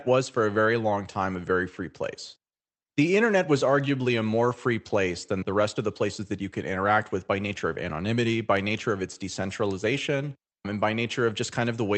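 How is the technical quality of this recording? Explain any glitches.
No glitches can be heard anywhere in this speech.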